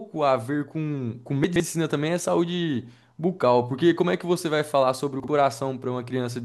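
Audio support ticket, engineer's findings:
Chunks out of order, 1.44–1.60 s: brief jumbled stretch of speech. The pattern fits one 40 ms chunk played about three chunk-lengths late. Probable component is the jitter buffer or the writer's sequencing.

Chunks out of order, 5.20–5.28 s: a shorter scramble, consistent with two adjacent 40 ms chunks swapped. Same probable component.

Unlike a dropout or skip, no audio is missing and nothing repeats. Only the order is wrong.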